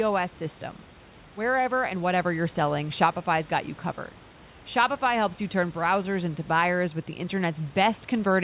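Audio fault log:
No fault is logged for this speech clip.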